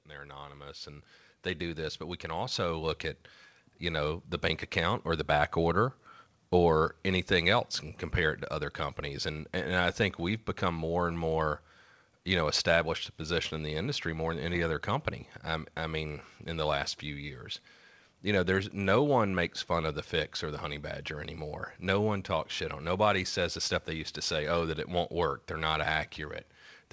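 From 0.05 s to 5.58 s the speech and the room noise behind it swell together, climbing steadily by about 12 dB until the level settles. This is automatic gain rising: the gain control judged the incoming signal too quiet and pushed its gain up gradually, so everything it passes, background included, grows louder at the same slow pace rather than the talker alone getting closer or louder.

Immediately afterwards, from 5.57 s to 12.95 s, the opposite happens more gently. The speech starts out loud and then sinks by about 3 dB, carrying its background down with it. This is automatic gain falling: the control now judged the input too hot and eased its gain back over several seconds. Throughout, the top end stops at 8 kHz, as expected from a wideband call codec of the G.722 kind.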